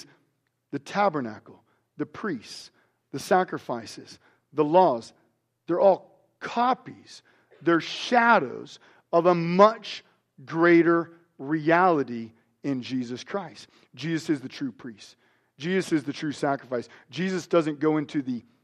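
No technical faults can be heard anywhere in this speech recording.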